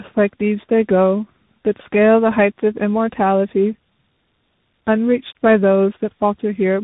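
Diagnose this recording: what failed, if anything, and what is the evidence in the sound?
Tandem speech coding at the codec stage: the speech passed through two speech codecs in a row, most likely a low-rate AMR-type coder and then a CVSD-style delta-modulation coder, the second re-encoding the first's damage. Throughout, nothing remains above 3.8 kHz, and the speech sounds rough, muffled and warbly.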